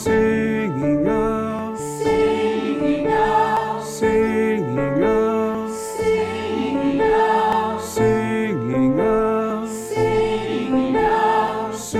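At 1.59, 3.57, 5.55, 7.53, 9.50 and 11.48 s the sound skips abruptly, roughly 20 ms lost each time, joined without a gap. The steady 2 s spacing indicates audio missing between chunks, likely dropped at each chunk handover.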